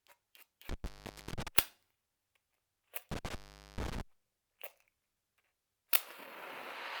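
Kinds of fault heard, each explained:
Intermittent contact: A loose plug or cable briefly breaks the signal path. The sound drops out twice, near 0.69 s and 3.12 s. Each gap lasts about 450 ms and 430 ms, with crackle at the edges and faint hiss while open.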